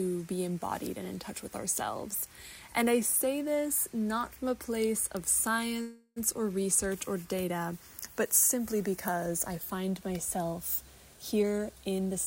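At 5.81 s the sound stops moving forward and turns into a fading buzz. This is a call audio freeze. Packets were likely held up in transit, so the jitter buffer ran dry. The receiver stretched the last sound to fill about 0.35 s, and the final 70 ms or so fall to silence. At 6.18 s the audio resumes from exactly where it stopped. Nothing is lost. A gap has simply been inserted.

From 11.32 s to 12.13 s the audio hurries. This is a jitter buffer speed-up. The buffer was holding more audio than it wanted, so the receiver trimmed short pitch-period pieces again and again. Playback runs at about 121 percent of normal speed. The pitch stays the same. Roughly a fifth of a second is cut out across this stretch, which makes the timing sound rushed.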